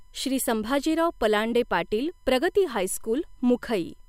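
A faint USB whine runs throughout: a steady 1 kHz tone from the bus's 1 ms frame timing, far above mains hum and roughly 45 dB below the speech.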